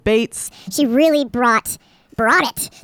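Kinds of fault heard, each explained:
Wrong sample rate: from about 0.47 s the speech plays 1.5 times too fast and roughly seven semitones high, which fits 32 kHz audio played at 48 kHz.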